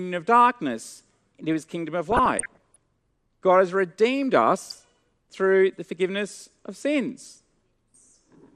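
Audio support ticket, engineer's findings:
MP2 compression, throughout: dull, gurgling, granular speech, plainly audible codec damage. Likely low-rate MPEG Layer II starving sub-bands of bits, consistent with about 80 kbps.

DAB burbling, 2.10–2.77 s and 4.65–4.84 s: short noise blips in single sub-bands. Residual bit errors, well under one percent, corrupting sub-band samples and scale factors frame by frame.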